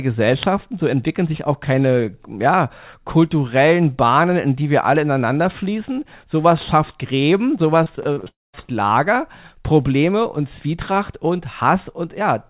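From 7.84 s the speech starts breaking up, a case of repeated packet loss with that robotic sound. Over roughly 0.44 s there are six short holes, the longest 38 ms. Each one gets papered over by stretching the last bit of sound, so about 27% of that stretch is filled-in guesswork. You hear it go choppy and robotic, with little pieces of the speech just gone. It's all band-limited, with nothing above 4 kHz, which fits a narrowband G.711 call path.

Right at 8.28 s it gets worse. The audio hangs on a fading buzz for a moment and then goes quiet for about 200 ms. Speech only picks up again at 8.55 s, and whatever was said in that gap never comes back. That pattern is most likely a long network dropout, where nothing arrived for around a quarter of a second and the receiver could only smear the last sound out briefly before giving up into silence.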